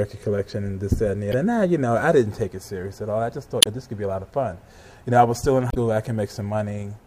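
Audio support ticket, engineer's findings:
Damaged data in a compressed stream, three hits: 1.30–1.34 s, 3.59–3.67 s, 5.69–5.77 s. Short glitches, each about 40 to 80 ms. Points at the decoder input. Corrupt bytes in the bitstream make the decoder misread or drop those frames, lose sync, then hunt for the next valid frame header before clean audio resumes. Worth checking the transport or storage path feeding the decoder.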